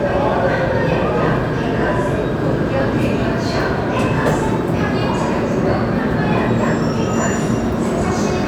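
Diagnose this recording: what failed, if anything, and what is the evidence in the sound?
Nothing stood out on listening to this recording.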